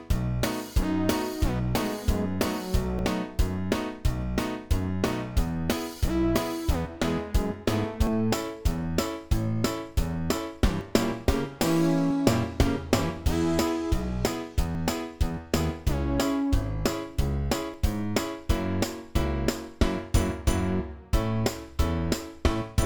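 At 2.99, 8.07, 10.81, 14.75 and 17.74 s you get the sound jumping forward, no gap of silence, just a splice. That pattern is most likely a dropped buffer (overrun): the capture side didn't grab its samples before the hardware wrote over them, so a short slice vanished and the edges were butted together. Most skips lose around 10 ms; the one at 14.75 s is bigger, roughly three times that.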